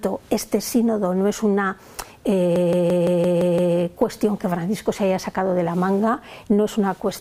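From 2.56 to 3.76 s, a system hang loop repeats one 170.67 ms chunk seven times at 5.86 Hz, a machine-gun stutter consistent with an 8192-sample ring buffer replaying.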